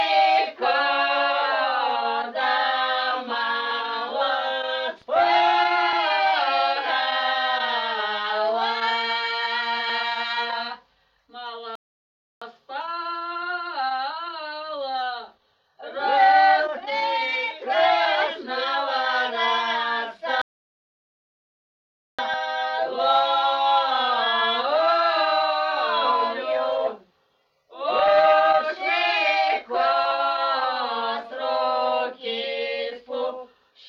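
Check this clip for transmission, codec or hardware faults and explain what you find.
Two transmission faults are audible, both of the same kind. Rebuffering stalls occur at 11.75 to 12.42 s and 20.42 to 22.19 s: the player drained its downloaded audio and waited for more, so the sound drops to silence for 0.66 s and 1.77 s, then resumes exactly where it stopped, adding time without losing any audio.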